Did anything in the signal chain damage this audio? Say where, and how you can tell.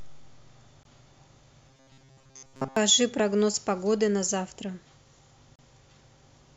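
Yes. Two short silences break the continuous speech: one of about 20 ms at 0.83 s and one of about 32 ms at 5.56 s. Each has smeared edges, and the sound resumes exactly where it stopped. This is a gap at a join of encoded pieces, a codec-stage fault. Separately encoded segments were joined without trimming, so the encoder's start-up delay and final-frame padding remain as silence.

At the driver or buffer stage, a regular click recurs every 1.63 s between 1.57 s and 6.49 s, about four events in all. That steady spacing points to clock drift buffer slips. The likely cause is two devices running on independent clocks, mismatched by something on the order of several hundred parts per million. The buffer between them slowly overflows or underruns until a small block, around 15 samples, is dropped or repeated.

From 1.68 s to 2.76 s the voice turns into a rigid, metallic buzz at 133 Hz that still loosely tracks the speech. 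This is robotic sound from repeated short buffers, and the likely cause is audio arriving too slowly at the buffer or playout stage. The software fills the shortfall by looping the last few milliseconds, most of the time, while the real material is skipped. The buzz period of about 7.5 ms fits a buffer of roughly that length being replayed.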